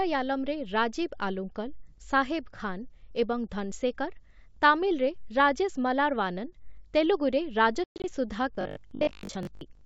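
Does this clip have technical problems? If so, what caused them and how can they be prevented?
Yes. From 7.84 to 8.05 s the speech drops into hard-edged holes, 160 ms lost over 200 ms with the longest gap 120 ms, and returns briefly slightly distorted. This is packet loss on an ADPCM call: around seven lost packets left the decoder's predictor and step size out of step with the sender's. Jitter buffering and packet loss concealment would prevent it.

From 8.55 s to the end, the speech turns into a rigid, metallic buzz at 50 Hz, with roughly half the audio repeated. This is robotic sound from repeated short buffers, likely caused by audio arriving too seldom so that the last 20 ms was replayed. A larger playback buffer and steadier delivery would prevent it.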